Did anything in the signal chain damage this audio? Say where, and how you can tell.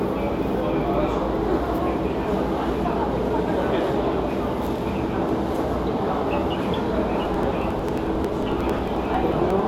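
Yes, there are periodic USB or driver dropouts at the interface or driver stage. From about 7.25 s to 9.59 s there's a steady train of ticks every 0.09 s, about thirty in all. At each one, roughly 10 ms of audio is skipped outright rather than filled with silence, so the waveform jumps and clicks. That rigid spacing points to something blocking the USB bus or audio driver on a fixed schedule, not to a problem in the source.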